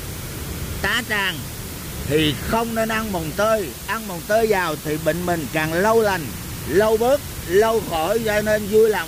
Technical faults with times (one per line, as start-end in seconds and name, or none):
0.00-9.07 low bit depth with dither